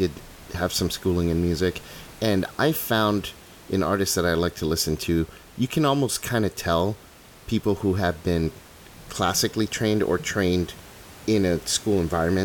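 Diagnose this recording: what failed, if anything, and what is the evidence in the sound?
Nothing failed; room noise sits about 23 dB below speech.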